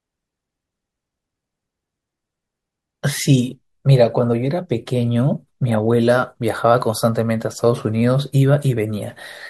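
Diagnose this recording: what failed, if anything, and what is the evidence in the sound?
No failure at any stage.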